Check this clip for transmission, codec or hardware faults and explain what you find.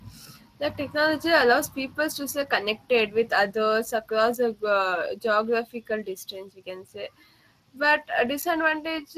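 There's one fault, and it runs through the whole clip: Speex codec damage on the speech, start to finish. Speex is a CELP codec that models each stretch of speech and spends a fixed bit budget on the excitation driving that model. The damage is plainly audible here, with that coded, processed grain layered over the speech. The rate points to something around 22 kbps. Nothing sits above 15.4 kHz, so the very top of the band is simply missing.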